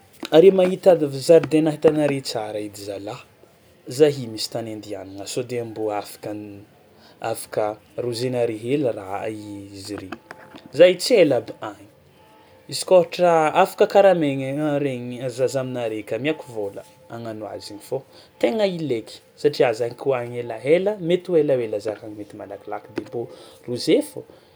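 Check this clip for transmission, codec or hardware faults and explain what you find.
No transmission, codec or hardware fault can be heard anywhere in the speech; the signal stays continuous and stable throughout.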